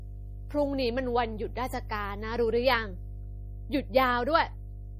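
Mains hum runs through the whole speech clip as a steady 50 Hz tone sitting only about 10 dB below the speech, loud enough to hum under every pause. Power-line current has leaked into the signal path, most plausibly through a ground loop or a transformer close to the recording chain, so the 50 Hz supply frequency and its low harmonics ride along as a constant drone regardless of what is being said.

MP3 compression damage is also present from start to finish and is plainly audible. Nothing reaches above 15.2 kHz, where the encoder has cut the treble outright, and the remaining sound has a watery, swirling quality, with sibilants turning metallic and consonant onsets smeared. The cause is likely heavy MP3 encoding at a low bitrate, fitting roughly 40 kbps. Starved of bits, the encoder drops quieter spectral lines, and as those lines flicker on and off between frames they produce the shifting, underwater texture.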